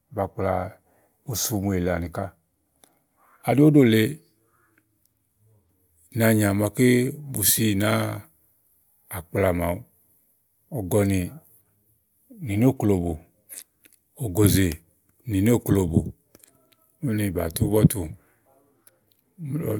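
No dropouts, glitches or other technical faults turn up anywhere in this speech recording.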